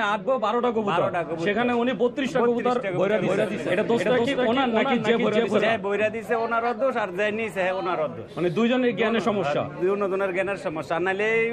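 A doubled audio track runs from 3.10 s to 5.70 s: a second, full-band copy of the audio trails the original by roughly 300 ms at about the same level, so every onset is heard twice in a flat, slap-like repeat with no room tail or decay. The copy cuts in and out abruptly at both ends. The likely cause is the signal being captured again through a slower path, or an edit leaving two misaligned copies stacked.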